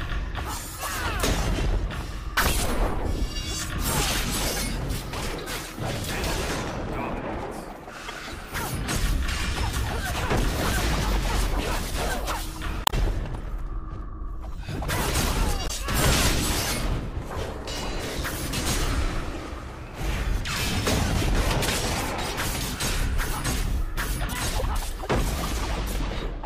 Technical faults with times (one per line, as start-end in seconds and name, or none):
8.07-8.10 damaged data in a compressed stream
12.84-12.94 damaged data in a compressed stream
15.64-15.71 damaged data in a compressed stream
19.34-19.36 damaged data in a compressed stream
24.59-24.63 damaged data in a compressed stream